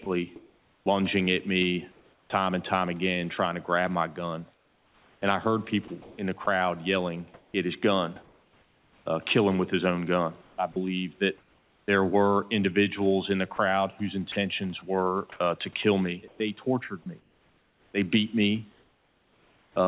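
Speech that turns choppy, its quiet edges swapped for synthetic hiss, at 0.04–2.3 s, 4.54–9.06 s (after "to grab my gun"), 10.42–11.88 s and 13.56–19.76 s, likely sound chopped by the voice detector inserting comfort noise.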